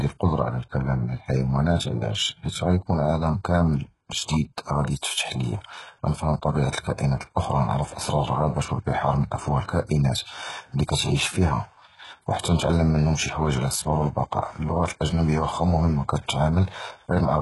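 Speech, with heavy HE-AAC compression damage throughout. Nothing is present above 11.5 kHz. The treble is likely rebuilt by band replication, making s sounds gritty and metallic. The damage fits a bitrate near 12 kbps.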